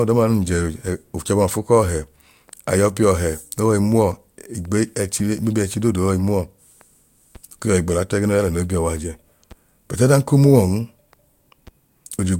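Listening through the speech recording, nothing stood out as a technical problem at any point.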